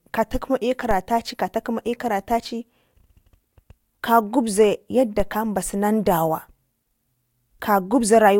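A low thump at 0.91 s and again at 5.20 s marks a DC step: the waveform's zero line jumps, then decays away through a roughly 5 Hz high-pass.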